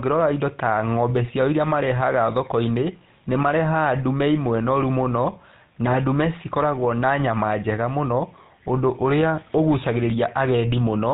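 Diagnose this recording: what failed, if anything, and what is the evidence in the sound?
The failure is at the codec stage. The speech has been through the GSM full-rate codec for its whole length, and the damage is plainly audible. There is a buzzy, gravelly roughness over every voiced stretch, and nothing above 4 kHz, which fits the 13 kbps full-rate coder. It models the vocal tract and excites it with regular pulses, keeping only every third excitation sample. On a spectrogram the energy stops flat at 4 kHz, and the harmonics look smeared and grainy.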